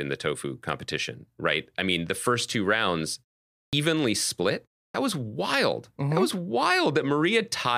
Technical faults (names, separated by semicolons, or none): clipped start after a pause